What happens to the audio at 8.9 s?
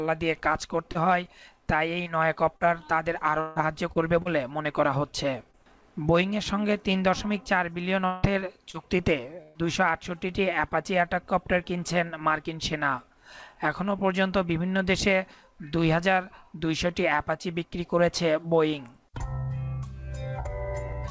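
At 8.9 s the sound falls inside a burst of repeated packet loss (robotic sound), from 8.05 to 9.58 s. Three gaps, the longest 171 ms, are patched by stretching the preceding sound, so the audio turns choppy with pieces missing rather than dropping to a single clean silence.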